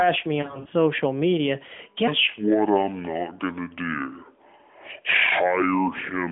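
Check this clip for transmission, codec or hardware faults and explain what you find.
Two faults stand out, heard through the AMR narrowband mobile codec's 250 to 3400 Hz line band, whose light coding character fits its 12.2 kbps mode.

Lost AMR speech frames, 0.42 to 0.68 s: radio errors corrupted frames, so the decoder repeated the last good pitch and vocal-tract settings at falling gain. About 120 ms is missing, scattered over 240 ms, with runs of at most 60 ms. This produces brief dips and warbles rather than a fade to silence. Unlike a plain dropout, the gaps are bridged by smeared, repeated sound.

Section at the wrong speed, 2.08 s to the end, starting around "to do": playback runs at 0.588 times normal speed, so pitch drops roughly ten semitones and everything sounds deep and slow. The likely cause is the section being played against the wrong clock. Because speed and pitch shift together, this is not a pitch-only effect.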